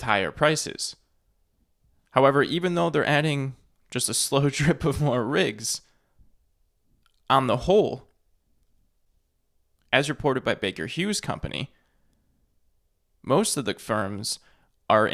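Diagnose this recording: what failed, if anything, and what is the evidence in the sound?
Listening through the speech recording, nothing stood out that would point to a failure at any stage of the chain.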